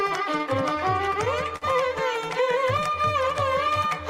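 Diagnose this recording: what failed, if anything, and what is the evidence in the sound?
Clock drift between sender and receiver: the network stage's sender clock runs roughly 3 percent slow, so the jitter buffer drains throughout and the playback timing never settles.

Repeated timing corrections from 0.03 to 3.89 s: the receiver repeats short pieces, slowing playback to 99 percent and adding about 40 ms. The edits are unevenly spaced.

Short stall from a late packet at 1.56 to 1.64 s: the buffer ran empty, and the last sound was stretched for 53 ms until the packet arrived. Nothing is missing, but the sound is held too long.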